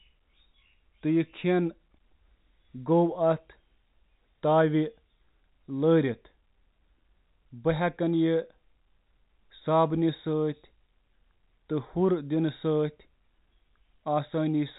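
No technical faults are present.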